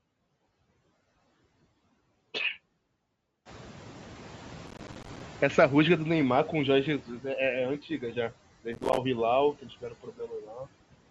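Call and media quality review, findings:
Noise suppressor artifacts, whole clip. Background pumps down between phrases and rises under speech. The suppressor applies about 14 dB of frame-by-frame band reduction to anything it classifies as steady noise. Band-limited to 8 kHz from the call mic processing.

Noise suppressor catching up, 3.45 to 7.12 s. Room noise jumps about 18 dB near 3.5 s and first passes with only about 8 dB of reduction. It then sinks gradually over roughly 3.7 s as the suppressor's noise estimate converges on the new floor.

Processor overload crackle, 4.67 to 5.21 s and 8.73 to 8.98 s. Gritty tearing rides on the audio, then stops. The DSP is missing deadlines again and again, dozens over each stretch, and each miss drops a hole of silence with hard edges. The gap spacing fits buffers of about 5 ms.

Speech cut by the noise suppressor, 9.61 to 10.66 s. Parts of the speech sound swallowed and faint, adding up to roughly half a second. 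The suppressor misclassifies these quieter speech segments as noise and attenuates them with the background, by up to about 15 dB.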